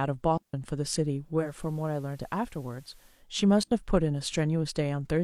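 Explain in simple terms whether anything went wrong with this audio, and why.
Digital wireless dropout at 0.37 s and 3.63 s: the wireless link lost data and the receiver muted, leaving clean silent gaps of 0.16 s and 0.08 s.

Digital radio blending to analogue from 1.35 to 3.26 s: the radio lost its digital signal and faded to FM, bringing some hiss and lower volume.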